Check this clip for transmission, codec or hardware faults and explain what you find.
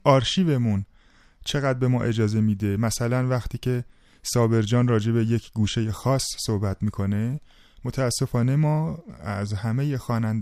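Nothing to flag here; as far as I can hear, the speech comes through without a single fault anywhere in the chain.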